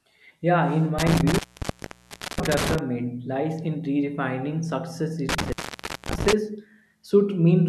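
Intermittent contact at 0.99–2.79 s, before "lies in redefining success", and 5.29–6.33 s, after it: a loose connection cuts the speech with crackling edges, unlike a clean dropout.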